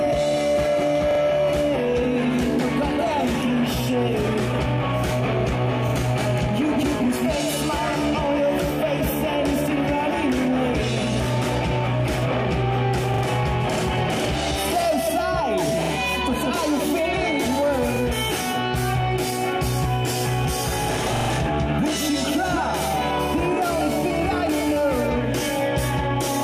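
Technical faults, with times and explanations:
1.11 to 1.20 s, 5.89 to 5.93 s, 13.14 to 13.23 s, 15.83 to 15.92 s, 17.96 to 18.01 s and 21.16 to 21.29 s: repeated buffer. Each time, a piece of sound about 43 ms long plays again, twice extra at 1.11, 13.14 and 15.83 s, once at 5.89 and 17.96 s, and three times at 21.16 s. Fresh audio arrived late, so the same block was resent, which fits a 2048-sample buffer. Hard joins between copies give a short, rhythmic stutter.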